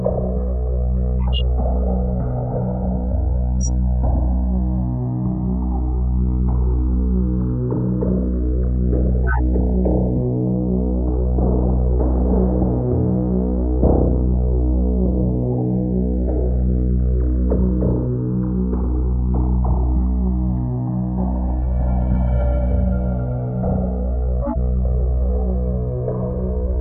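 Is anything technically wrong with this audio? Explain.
Yes, there are two faults in this recording of everyday sounds.

Channels drifting apart runs throughout. The two channels appear to be clocked separately, mismatched by roughly 150 ppm, so the inter-channel delay grows to around 2 ms by the end. In mono, comb notches sweep slowly, heard as gradual flanging.

Corrupt frame decoded occurs at 1.24–1.41 s, 3.61–3.68 s, 9.26–9.39 s and 24.41–24.57 s. Damaged compressed frames were decoded anyway, putting energy at the wrong frequencies, peaking around -10 to -15 dBFS. Each is heard as a brief chirp or noise burst spanning one to several frames.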